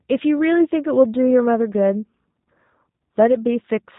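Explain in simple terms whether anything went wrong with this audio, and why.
G.729 codec damage runs through the whole clip, from start to finish. This is a compact phone-call format that doesn't store the sound wave itself. It sends a rough description of how the voice is shaped and pitched, plus a few pulses per tiny slice of time, and the receiver rebuilds speech from that. Everything above about 4 kHz is lost, so the speech comes across muffled, slightly rough and synthetic.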